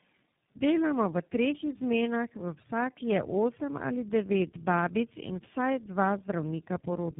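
Speech with tandem speech coding throughout: it sounds rough, muffled and warbly, with nothing above 3.7 kHz, which points to about three narrowband speech codecs in a row, each re-encoding the previous one's already degraded output at every network border.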